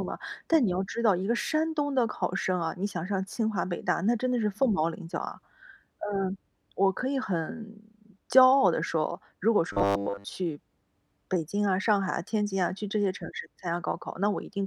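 From 9.73 to 10.26 s, robotic sound: a rigid, metallic 100 Hz buzz. Most of the audio was likely skipped while a 10 ms buffer repeated.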